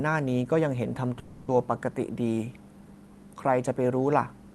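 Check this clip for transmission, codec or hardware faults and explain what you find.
One transmission fault stands out, a call audio freeze from 1.19 to 1.50 s, heard through the Opus call path with its high end stopping near 12 kHz. For about 0.3 s the speech is held as a decaying buzz or hiss rather than cut, most likely because packets stalled in transit and the jitter buffer ran dry, so the receiver stretched the last sound. When the speech resumes, it picks up exactly where it paused, about 290 ms later. A loss-and-concealment dropout differs because it would skip part of the speech, whereas nothing is missing here.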